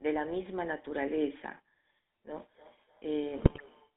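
Speech passed through a GSM full-rate codec for its whole length. It has the gravelly, buzzy texture of pulse-excited vocal-tract modelling, plainly audible and consistent with the 13 kbps full-rate coder. The band is limited to about 250 Hz to 3.7 kHz, so the top end is missing. From 2.54 s to 3.95 s there is feedback echo between two devices. The sound returns at intervals of around 300 ms, peaking about 24 dB below the speech, as a second device in the same room replays the call into a microphone whose echo canceller cannot remove it. Between 3.40 s and 3.61 s, GSM bit errors break the audio into squawks, pops and gargling. This fits roughly ten corrupted 20 ms frames at an error rate of a few percent, with damaged filter, pitch and gain parameters distorting the spectrum and level frame by frame.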